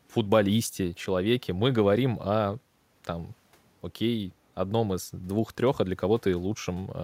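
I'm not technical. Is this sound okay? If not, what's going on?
Yes, the recording has no technical problems: nothing in the signal gets cut off, drops out, or comes through damaged.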